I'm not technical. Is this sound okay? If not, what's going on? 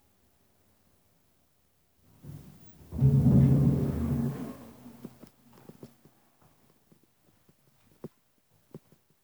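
Yes, this one's fine: nothing in it cuts out, crackles, skips or sounds off, so there's nothing here you need to worry about.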